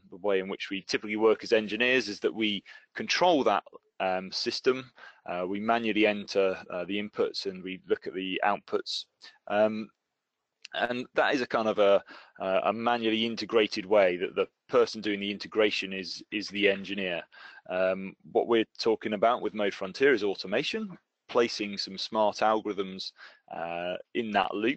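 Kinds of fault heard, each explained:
No technical faults can be heard in this audio.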